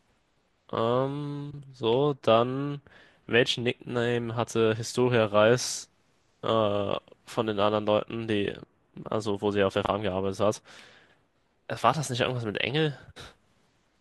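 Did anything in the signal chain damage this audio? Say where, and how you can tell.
Yes: frames out of order from the network, at 1.5, 9.84 and 11.05 s. Adjacent 85, 39 and 43 ms blocks swap halves, leaving abrupt spectral discontinuities at each join.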